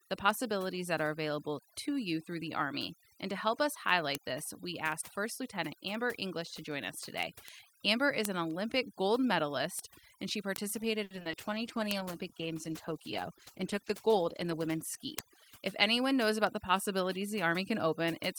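Overdone noise removal runs through the whole speech clip. The noise reduction was set too strong. It pushes frequency bands near the noise floor far down or off, along with quiet parts of the voice. Pauses fall to near silence with twinkling specks.

Word clock ticks start at 0.31 s and continue to the end. They come roughly every 0.3 s. The receiving device runs on its own clock, not locked to the sender's. The two differ by around 100 ppm. Each time they slip, one sample is dropped or repeated. The result is a steady train of sharp ticks.

From 11.03 to 11.35 s there is repeated packet loss with a robotic sound. Five holes open in quick succession, the longest 70 ms. Each is patched by stretching the last sound, about 140 ms in all. Around 100 ms is simply missing. The voice turns choppy.

A call bitrate drop follows at 11.38 s and lasts until 17.48 s. The bandwidth estimate fell, and the encoder went from 48 to 14 kbps. 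It stayed at the lowest rate for about 3.6 s. Coding becomes coarse and the top end is cut. The voice sounds rough and muffled.

Inside that stretch, from 11.50 to 12.04 s, comes a jitter buffer slow-down. The receiver repeated short pitch periods to build a reserve, adding 43 ms. Speech runs at 93 percent speed with the pitch unchanged. Sounds are drawn out.

From 14.13 to 15.17 s a jitter buffer speed-up does the reverse. Too much audio had piled up, so the receiver cut out short pitch-period pieces. Roughly 70 ms is removed. Speech runs at 107 percent speed at the same pitch and sounds hurried.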